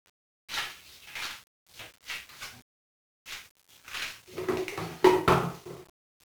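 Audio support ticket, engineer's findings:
1-bit DFPWM compression, 0 s to end, whole clip. Dense broadband fuzz and crackle riding on all sound, treble smothered under hiss. Probable component: DFPWM encoder in the capture or storage path. Mechanism: one bit per sample nudges an adaptive level up or down, so the decoded waveform only roughly tracks the input and the leftover error lands as heavy noise across the band. Damage heavy; the grain fits a stream around 48 kbps.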